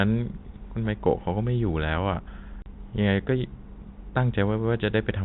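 Telephone-band speech, capped at 4 kHz by G.711 coding, has one dropout from 2.62 to 2.66 s: packet loss filled with silence. The 40 ms hole fits two lost 20 ms packets, appearing as a hard-edged flat gap in the waveform and a blank vertical strip on the spectrogram.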